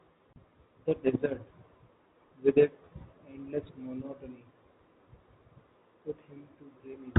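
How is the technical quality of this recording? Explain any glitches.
One glitch stands out in the speech, carried over G.711 telephone coding, which caps the sound at 4 kHz. Packet loss filled with silence occurs at 0.33 s, with a 30 ms gap to 0.36 s, consistent with one dropped packet. The receiver inserted silence instead of concealing the loss, so the speech cuts out abruptly, with hard edges at both ends of the hole.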